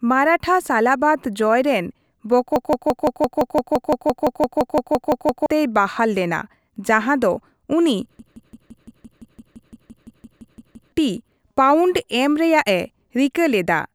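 From 2.56 to 5.46 s, a system hang loop takes over the speech. The machine stalled while the sound hardware kept replaying its ring buffer. One 0.17 s slice repeats 17 times, about 5.9 times a second, a machine-gun stutter. The length fits an 8192-sample buffer. Roughly three seconds of audio are lost before "ᱵᱟᱦᱟᱞ ᱞᱮᱱᱟ ᱡᱟᱸᱦᱟ ᱫᱚ". After "ᱞᱮᱱᱟ ᱡᱟᱸᱦᱟ ᱫᱚ ᱩᱱᱤ" it recurs from 8.19 to 10.92 s. A slice of the same length repeats 16 times, and about three seconds are lost again.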